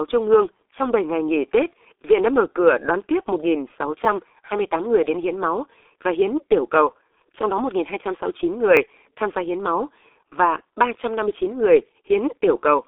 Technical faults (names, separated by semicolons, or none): G.723.1 codec; repeated buffer